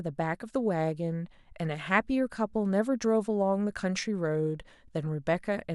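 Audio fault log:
1.73 s: DAB burbling. A brief patch of watery blips breaks over the speech. Weak reception let a small share of bit errors, well under one percent, slip past the error correction. Those errors reached the compressed audio data directly. Corrupted samples put short noise blips in single frequency sub-bands. The burst sounds like a handful of damaged frames, perhaps six. That is why it sounds like a few watery blips.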